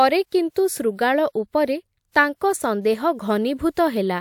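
Nothing technically wrong turns up anywhere in this short speech recording, so there's no fault here to time or trace to a cause.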